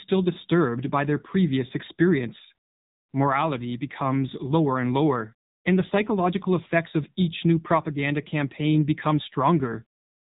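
The speech has been squeezed through the AMR narrowband mobile codec at a low bitrate, which fits roughly the 7.95 kbps mode of AMR-NB. Throughout, nothing reaches above about 3.8 kHz, and the pulse-driven vocal-tract model leaves the voice plainly buzzy and synthetic.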